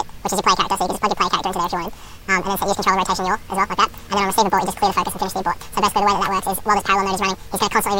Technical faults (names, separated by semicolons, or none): audio read two samples at a time (double speed)